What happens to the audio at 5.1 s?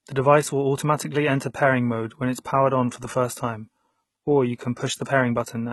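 Pre-echo occurs at about 5.05 s, a smear of roughly 16 ms. The codec spreads its quantisation noise across a whole transform block, so noise meant for a sharp attack late in the block also fills the quiet moment just before it. A brief hiss leads into the onset, which sounds softened rather than crisp.

Heavy compression damage is present here as well: nothing reaches above 11.9 kHz, and the treble sounds gritty and synthetic, with sibilance turning metallic. The likely cause is HE-AAC at a very low bitrate, around 16 kbps. It rebuilds the upper band by copying lower-frequency content upward under a coarse envelope, so the top end is an imitation whose harmonics don't line up with the real ones.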